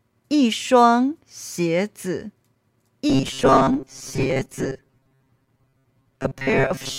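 From 3.10 s on, audio likely arrived too seldom and the gaps were filled with repeats, causing robotic sound from repeated short buffers: a rigid 134 Hz buzz.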